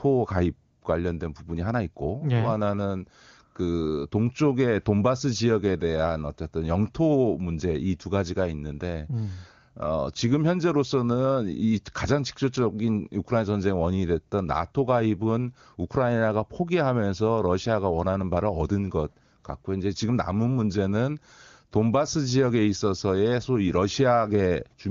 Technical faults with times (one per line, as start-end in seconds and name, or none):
none